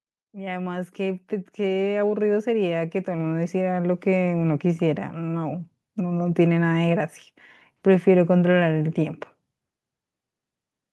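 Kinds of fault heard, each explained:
Automatic gain rising: The gain control judged the input too quiet and slowly turned itself up. From 0.32 to 3.97 s, the speech and background noise swell together by about 12 dB. Through the call codec, the top end stops near 12 kHz.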